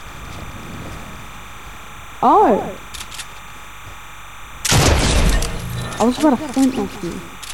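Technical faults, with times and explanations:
Throughout, timecode bleed: a steady chirping warble near 1 and 2 kHz, roughly 20 dB below the sound, pointing to 29.97 fps linear timecode leaking in from an adjacent line.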